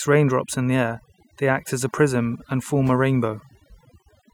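Throughout the clip, a noise reduction stage has been pushed far too hard, producing overdone noise removal. It pulls individual frequency bands down or shuts them off whenever their level sits close to its noise estimate, and the softer parts of the speech fall below that threshold along with the noise. The gaps between phrases drop to near silence dotted with twinkling specks, while the voice is stripped of its quieter detail.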